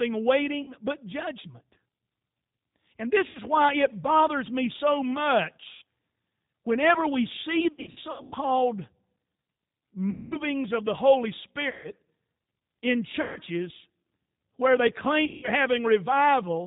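Throughout, the speech carries G.729 codec damage at 8 kbit/s. Nothing above 4 kHz survives, and the voice sounds rough and synthetic. VoIP packet loss concealed by the speech codec recurs at 0.62–0.72 s before "but judgment", 3.29–3.39 s before "why it bothers me", 5.73–5.83 s, 7.72–8.36 s after "whenever we see", 10.10–10.39 s, 11.69–11.91 s, 13.21–13.40 s and 15.25–15.50 s. The decoder stretches its last pitch into a fading buzzy tone or coloured noise, and the voice recovers weakly afterward.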